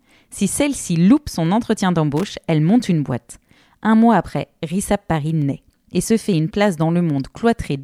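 A speech recording with two kinds of fault. Single sharp clicks occur at 1.46 s, 5.42 s and 6.82 s. Each is likely from dropped samples. A tiny fraction of a millisecond goes missing, so the waveform jumps abruptly and leaves a thin vertical streak across the spectrum. No sound is audibly lost. From 2.17 to 2.24 s there is a brief burst of irregular crackle and scratching, about 70 ms long. This is loose connector crackle. A poor contact is rapidly making and breaking, chopping the signal.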